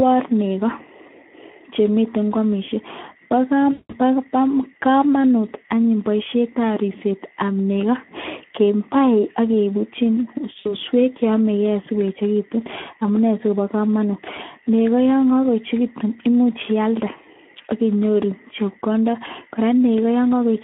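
From start to finish the speech carries plainly audible Speex codec damage. The sound is hoarse and grainy, as the CELP coder has too few bits to model the excitation, which fits a setting around 11 kbps. The audio is confined to a telephone band of 200 Hz to 3.4 kHz. On a spectrogram, energy stops sharply at both edges, and the harmonics look smeared and noisy rather than cleanly striped.

At 3.71 to 3.96 s comes VoIP packet loss concealed by the speech codec. About 180 ms of audio went missing, which points to nine 20 ms frames. The decoder keeps repeating its last pitch and filter at falling gain, so the sound stretches out and fades. A spectrogram shows frozen, smeared energy thinning out, and the waveform shows a decaying pattern. A shorter gap, about 60 ms, hits at 10.59 to 10.75 s, giving a brief stretched smear with a weak, distorted recovery afterward.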